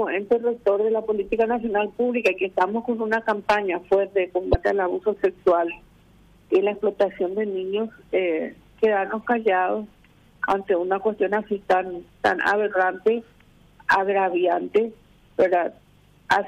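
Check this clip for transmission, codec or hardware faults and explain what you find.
One fault is audible: a broken MP3 bit reservoir, from 4.51 to 4.55 s.

For about 43 ms the audio skips forward and is briefly disturbed, roughly the span of two frames of about 26 ms each. The likely cause is missing MP3 frames. The frame after the gap looked back into the reservoir for data it had stored in earlier frames and found bytes from the wrong frame. That corrupted the first frames decoded after the cut.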